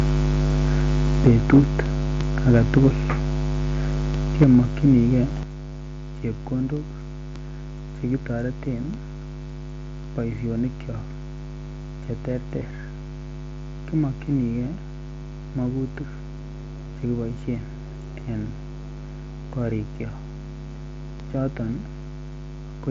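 Microphone overload at 1.25 to 1.6 s: the loudest syllables take on a harsh, crackling edge as their peaks are flattened, likely because the input was set too hot and drove the converter about 6 dB past its limit, clipping a small share of samples. The same rough edge returns at 2.49 to 2.88 s, about 3 dB over, and at 4.41 to 4.59 s, about 5 dB over.

Microphone volume stepped down at 1.27 s: the speech and the background drop together by about 4 dB in a single step, likely the call software reacting to the distorted peak by lowering the device's input volume. It happens again at 4.44 s, about 4 dB down, and at 5.43 s, a deeper cut of about 7 dB.

Concealed Bluetooth headset packet loss at 12.60 s: about 15 ms of audio from the headset link never arrived, and the receiver filled the gap by repeating a closely matching slice of the preceding waveform. Two frames were lost in a row, so the patch is a short run against the 8 kHz-limited sound of the mSBC headset link.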